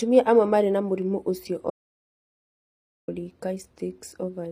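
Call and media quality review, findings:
HE-AAC compression throughout. Treble sounds synthetic and gritty, with sibilants metallic and lispy. Nothing above 15.5 kHz. Likely HE-AAC v2 with spectral band replication, copying low bands upward so harmonics misalign. Damage plainly audible, which fits a low bitrate near 24 kbps.

Audio dropout to silence, 1.70 to 3.08 s. The speech cuts off mid-flow and resumes about 1.38 s later. The gap is silent, with no room tone. Likely a lost input or a failed link, with the encoder writing silence. Content in the gap is gone.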